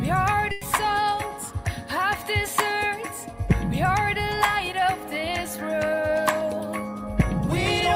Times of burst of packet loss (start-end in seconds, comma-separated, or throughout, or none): 0.51-0.63